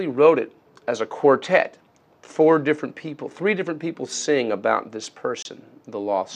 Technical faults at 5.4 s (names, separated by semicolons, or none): digital broadcast dropout